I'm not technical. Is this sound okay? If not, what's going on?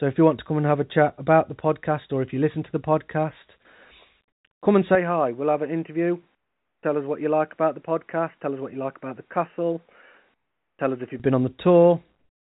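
No. Three separate problems can be heard in this speech.

First, sample clock jitter runs through the whole clip. The timing of the recording device wobbles very slightly, so each tiny slice of sound is caught a fraction early or late. This leaves a faint roughness on louder, brighter sounds that disappears in the pauses.

Second, at 4.95 seconds, right after "come and", the input was likely switched to a poorer device. The speech suddenly turns duller and a bit quieter, with nothing above about 3 kHz. There is no gap at the change. The better sound returns at 11.2 seconds, just before "been on".

Third, comfort noise in place of the background appears twice, from 6.35 to 6.83 seconds and from 10.34 to 10.79 seconds. In those pauses the real room sound is likely swapped for a flat, artificial hiss. That hiss is noticeably quieter and has no detail.

The call connection itself limits the sound to below 4 kHz, which is normal for that kind of phone line.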